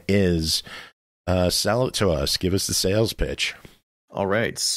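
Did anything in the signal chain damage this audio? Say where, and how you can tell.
Yes. Faint, evenly spaced ticks run from 0.3 s to 4.55 s, around fifteen of them, at about one every 0.4 s. These clock slip clicks likely come from unsynchronised converter clocks differing by roughly 50 ppm, dropping or repeating one sample per slip.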